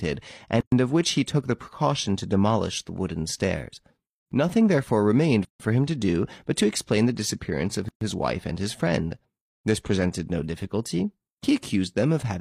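Short dead silences cut into the speech at 0.61 s (about 116 ms, before "of which he took"), 5.45 s (147 ms, after "therefore remained") and 7.89 s (128 ms, after "explain the disappearance of"). Each is a gap at a join of encoded pieces, where separately encoded segments were spliced with their start-up delay and end padding left in.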